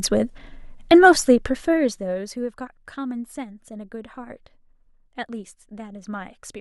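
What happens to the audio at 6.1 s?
At 6.14 s about three corrupt frames are decoded: flipped bits misplace energy across frequencies, giving a brief chirp, squeak, blip or burst of noise near -30 dBFS.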